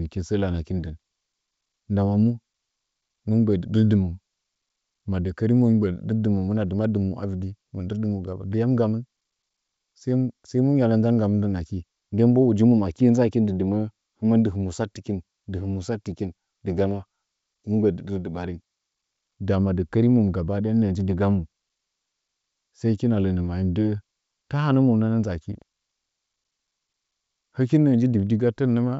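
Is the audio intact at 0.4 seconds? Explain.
Yes, the audio is intact at 0.4 seconds, with the speech carried cleanly through G.722 wideband telephone coding at 64 kbit/s and nothing breaking up or dropping out at that point.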